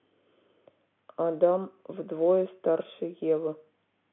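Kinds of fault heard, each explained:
No technical faults are heard: the speech arrives through ordinary G.711 telephone coding, so the sound sits within a line band of about 150 Hz to 3.5 kHz with that format's faint level-following hiss beneath it.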